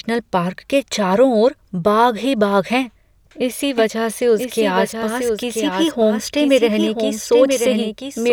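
At 3.78 s, just after "ही बाघ हैं इसी", a doubled audio track begins. A second copy of the speech appears about a second behind the first. It is full-band and roughly 5 dB quieter. It cuts in abruptly, with no fade. It carries no reverb or room colour, so it sounds like a clean overlapping repeat rather than an echo. It runs to the end of the clip. The likely cause is the signal being captured twice, once through a slower path.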